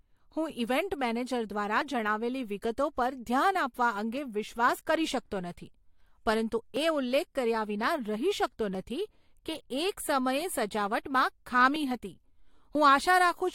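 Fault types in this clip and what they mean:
Overlap between stream segments: Two consecutive pieces of the stream claim the same stretch of time. The player discards the shared part, though that sound was never actually doubled. A few milliseconds of speech vanish and the waveform jumps. Here that gives six tiny clicks or skips, at 1.81, 4.79, 6.76, 8.75, 11.76 and 12.75 s. They are spaced at whole-second intervals, which fits one-second segments. The first comes just before "જણાવેલી વિગતો પર ધ્યાન".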